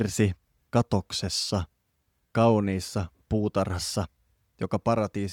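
Nothing in the audio stood out as a technical problem on listening.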